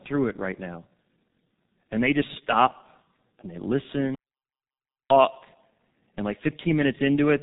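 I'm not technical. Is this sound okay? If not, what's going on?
No. The whole recording has gone through the G.723.1 codec, an old internet-phone format that squeezes speech hard. Everything above about 3.8 kHz is gone, so the voice sounds muffled and hoarse, and sharp sounds like s and t blur together.

There's also a playback stall. Right after "just stop and they", the sound cuts out at 4.15 s and stays silent until 5.10 s, almost a full second. The likely cause is the player running short of data, so it paused before carrying on.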